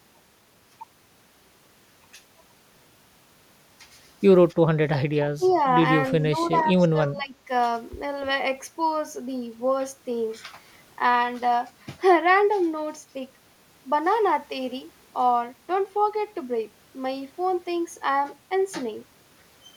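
The echo canceller most likely could not tell the near talker from loudspeaker echo while both sides spoke, and turned both down: speech suppressed in double talk. The speech dips by about 15 dB in brief stretches at 4.55 to 4.61 s and 5.37 to 5.57 s. From 6.11 to 7.5 s it dips again in pieces adding up to roughly 0.7 s, so the voice thins and partly drops out.

During two of those dips, a loudspeaker-side canceller likely let some of the signal through, producing an echo leak. A faint copy of the speech returns 291 ms late, about 25 dB below the voice at 5.43 to 5.54 s and about 30 dB below at 6.41 to 6.48 s. Each is heard as a short, quiet, delayed scrap behind the voice.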